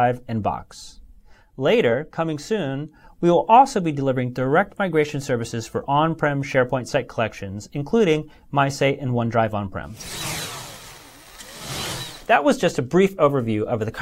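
At 12.18 s, a compressed frame arrived with flipped bits and the decoder played it anyway, a corrupt frame decoded. Misread codes placed energy at wrong frequencies for roughly one frame, giving a brief, low-level chirp, squeak, blip or burst of noise.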